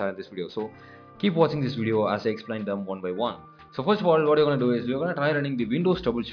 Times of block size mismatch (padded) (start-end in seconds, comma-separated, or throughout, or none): none